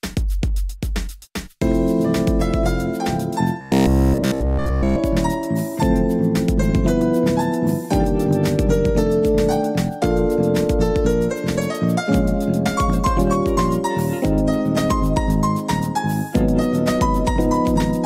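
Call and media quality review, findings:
Robotic sound from repeated short buffers, 3.61–5.01 s. Rigid metallic buzz near 66.8 Hz. Likely starved playout buffer looping roughly 15 ms segments; most audio skipped.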